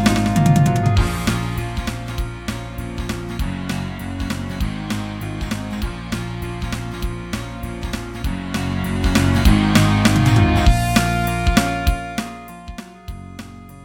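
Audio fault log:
Nothing stood out on listening.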